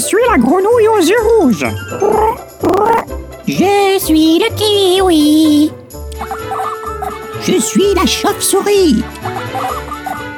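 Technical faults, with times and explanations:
2.65–3.01 s, processor overload crackle: about ten short buffers, each around 5 ms, miss their deadline in quick succession and replay stale audio with hard edges, giving a gritty tearing burst. Unlike a single dropout, it is a clustered run that stops once the load passes.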